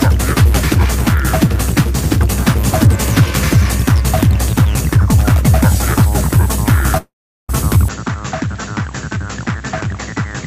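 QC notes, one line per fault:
6.97–7.51 s, long network dropout: roughly half a second of audio never arrives. The receiver stretches the last bit of sound into a buzzy tail that fades out, and then there's around 0.38 s of near silence before the audio picks up again further along, with that chunk simply gone. The smeared fade followed by dead air is the classic sign of concealment running out, so a dropout on the network side is the likely cause.
7.88 s to the end, input switched to a poorer device: with no gap at the join, the sound suddenly drops by roughly 10 dB and goes duller, with nothing left above 7.6 kHz. A new steady background noise comes in too, sitting roughly 35 dB under the signal. That narrower band plus a different level and noise floor points to the recording likely jumping to another microphone or a headset profile partway through.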